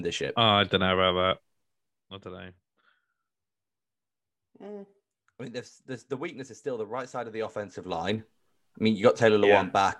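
Zipper noise shows up twice. From 1.31 to 2.19 s, just before "don't know", the level drops by about 15 dB in 2 dB jumps, around ten a second, with no smoothing between them, so each jump clicks and you get a quick ticking under the speech. At 7.72 to 8.19 s, right after "right side of the", it climbs back up by about 15 dB the same way, only faster, around twenty steps a second, so it sounds more like a buzzy zip.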